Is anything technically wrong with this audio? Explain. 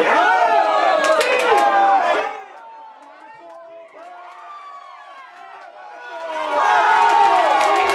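Yes, there's zipper noise on two level moves. From 2.12 to 2.48 s the level drops by roughly 25 dB in 3 dB jumps. From 5.92 to 6.68 s it comes back up by about the same amount in 1 dB jumps. Both happen at around thirty steps a second. The gain is stepped rather than smoothed, so every jump puts a tiny click in the waveform, and together they make an audible ticking zip over the sound.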